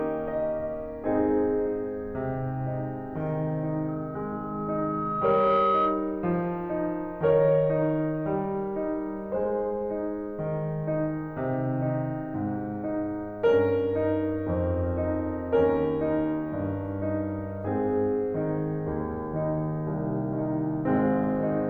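From 3.88 s to 6.30 s a single piercing tone near 1.3 kHz swells over roughly a second and a half until it sits a few decibels above the music. This is loudspeaker feedback squeal: the microphone was picking up its own loudspeaker, and at that frequency the loop gain exceeded one.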